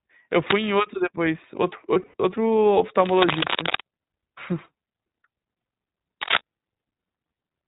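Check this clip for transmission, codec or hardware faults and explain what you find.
Three faults are present: narrowband, codec-coloured speech throughout, a brief buzzy dropout, and three scratchy noise bursts.

Throughout, the speech is dull and band-limited, with nothing above 4 kHz, and has a plainly audible rough, slightly synthetic texture. This is iLBC codec coloration. The codec codes each 20 ms frame independently at a low rate, which fits its 15.2 kbps mode.

From 1.94 to 2.14 s the speech turns into a held, buzzy, breathy vowel-like sound, then snaps back almost immediately. These are lost iLBC frames: about 120 ms went missing across 200 ms, consistent with six 20 ms frames, in runs of up to about 70 ms. The decoder filled the gaps by repeating the last pitch cycle mixed with noise.

At 0.47 to 0.69 s, 3.00 to 3.81 s and 6.22 to 6.37 s, dense, uneven scratching or rustling bursts sit over the speech. 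The first is about level with it and the later two about 5 dB above. This cable scratch noise likely comes from a worn cable or connector being moved.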